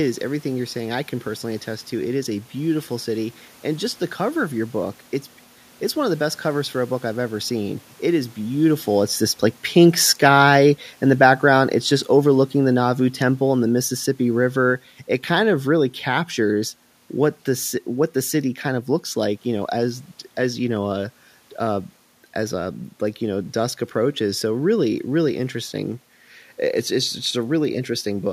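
Speech recorded with audible room noise, in which the automatic gain control pulls the level down from 9.75 s to 15.94 s. The voice and the background sink together by about 8 dB as the gain falls. On a waveform the envelope tapers steadily over those six seconds, and a spectrogram shows every band, noise floor included, darkening at once. A talker movement at around 8.5 s comes just before.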